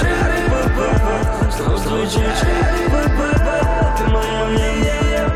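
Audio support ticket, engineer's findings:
Doubled audio track, throughout: full-band copy trailing about a third of a second, roughly equal level, no decay. Likely second capture path or misaligned edit.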